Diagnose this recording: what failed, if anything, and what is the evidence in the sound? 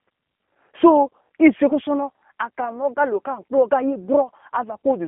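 The speech sounds narrow, slightly rough and synthetic throughout, with nothing below about 200 Hz or above 3.5 kHz. The fault is at the codec stage: G.729 codec damage, fitting an 8 kbit/s VoIP link that rebuilds each 10 ms frame from a vocal-tract filter, pitch predictor and sparse pulses.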